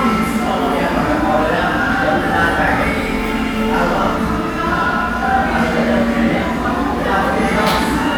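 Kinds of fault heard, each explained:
No technical faults can be heard in this clip. The sounds carry through without any dropout, distortion or glitch to point to.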